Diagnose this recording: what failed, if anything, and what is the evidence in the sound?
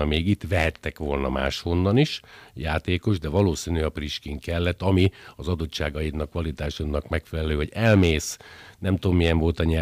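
Hard clipping at a converter or sample-format stage cuts peaks flat when they overshoot by about 1 to 4 dB. It is heard at 0.14–0.18, 0.56–0.68, 1.43–1.46, 3.37–3.41, 4.69–5.06, 7.85–8.14 and 9.23–9.60 s. The crackle comes only on loud peaks, which separates it from codec distortion spread across all levels.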